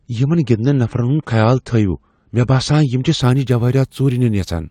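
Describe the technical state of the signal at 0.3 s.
At 0.3 s the player is still in an adaptive stream starting at a low bitrate, from 0 to 3.21 s. Nothing reaches above 9 kHz and codec artefacts are stronger, which fits a 32 kbit/s AAC rendition, until quality jumps at 3.21 s without a gap.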